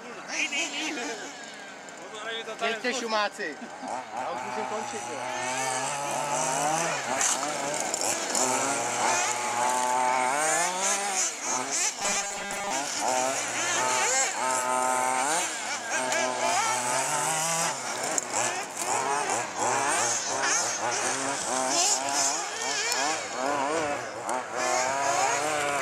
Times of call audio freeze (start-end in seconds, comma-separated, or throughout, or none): none